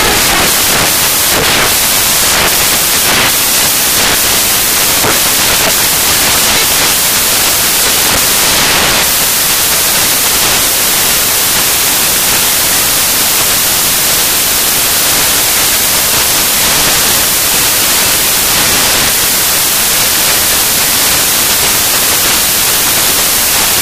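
From start to finish the audio carries samples built from the wrong bytes: each value is assembled misaligned or byte-swapped, so jittery low bits dominate. Unlike added hiss, this is loud, harsh broadband noise, close to white on the loud passages.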